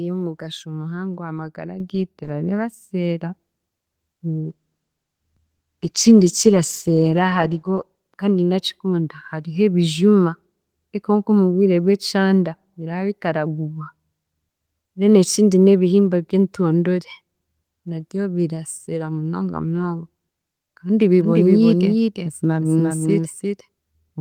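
At 1.8 s, right after "y'omugasho muhango aha magara", the microphone volume steps up: the speech and the background noise floor rise together by about 7 dB in a single jump. This is the call software's automatic input control deciding the microphone was too quiet and raising the device gain all at once instead of ramping it. The result is an abrupt loudness change, with the room tone lifting in step.

From 4.3 s to 7.93 s there is a call bitrate drop. The speech turns coarse and watery, and the top end is dulled. This pattern points to the encoder being pushed from around 32 kbps down to roughly 14 kbps, staying at that floor for about 3.6 s after the bandwidth estimate fell. At that rate Opus quantises more crudely and trims the highs. Clarity returns just before "kandi ndakikunda hariho ebijuma".

At 21.2 s a doubled audio track cuts in and runs to the end. A second full-band copy of the speech trails the original by about four tenths of a second, around 5 dB quieter. 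It has no decay or room colour, so it sounds like a distinct overlapping repeat rather than reverberation. The likely cause is the same signal being picked up again through a slower path and mixed back in.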